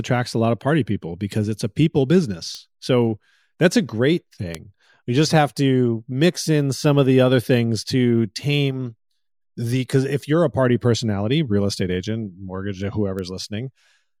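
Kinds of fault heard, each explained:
Bit error spike at 2.55, 4.55 and 13.19 s: a flipped bit makes a sample leap by a power of two and snap back, heard as an isolated broadband tick unrelated to the speech. The one at 4.55 s is loudest, about −7 dBFS, while the others reach about −13 dBFS.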